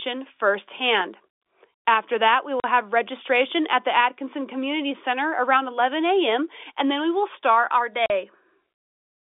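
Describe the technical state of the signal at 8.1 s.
Packet loss filled with silence runs from 8.06 to 8.10 s: a 40 ms gap, which fits two lost 20 ms packets, where the receiver played nothing. The sound drops out abruptly, with hard edges against the narrowband telephone-coded audio.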